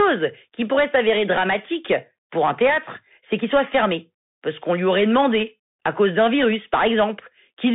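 Throughout the whole clip the speech sounds boxed-in and gritty. S sounds turn scratchy, louder bright passages break up, and a fine granular hiss sits beneath the speech. The band runs from 150 Hz to 3.6 kHz, with nothing above 3.8 kHz. This is the Bluetooth CVSD headset codec, which fits a 64 kbps link. Each sample becomes a single up-or-down bit with an adaptive step size. Fast high-frequency movement outruns that step, so the damage is plainly audible.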